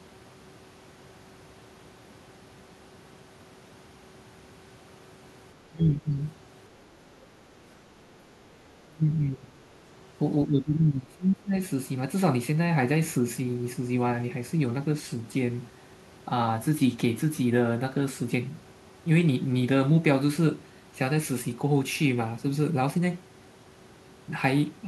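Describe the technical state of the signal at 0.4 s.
At 0.4 s the speech signal is intact, with no technical fault audible at that moment.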